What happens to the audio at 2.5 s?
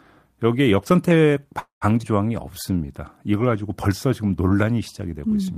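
At 2.48 s a jitter buffer slow-down begins and runs until 2.87 s. The receiver's buffer was short of reserve, so it repeated single pitch periods over and over to stretch the speech. About 69 ms of extra audio is added across that span, so playback runs at roughly 84 percent speed. The pitch stays the same. Sounds become drawn out.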